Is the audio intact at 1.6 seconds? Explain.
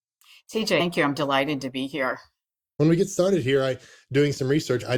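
Yes, at 1.6 seconds the speech plays through cleanly with no dropout, click, distortion or other fault.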